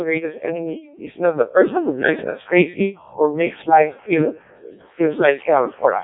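Codec 2 vocoder damage runs through the whole clip, from start to finish. The speech has been reduced to pitch, voicing, energy and a coarse spectral envelope, then rebuilt from sine waves, so none of the original waveform survives. The result is heavily robotic and buzzy, which fits the codec's lowest 0.7 kbit/s mode. Nothing is present above 3.8 kHz, leaving the speech dull and band-limited.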